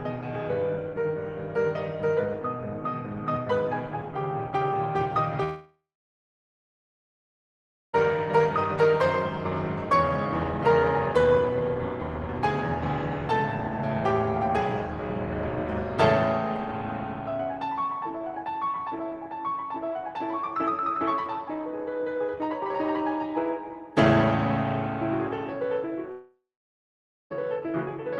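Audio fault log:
5.43–7.95 s and 26.11–27.32 s, long network dropout: the music smears into a brief fading buzz, then goes silent for about 2.1 s and 0.9 s. It resumes further on with about 2.5 s and 1.2 s missing, likely because audio stopped arriving and the receiver briefly stretched the last sound.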